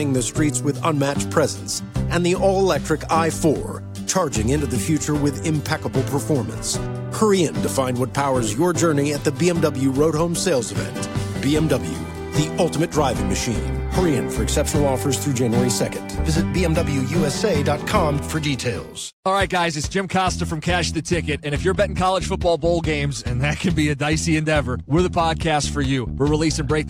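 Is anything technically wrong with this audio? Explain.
No, there is nothing technically wrong with this audio that a listener would pick out as a fault.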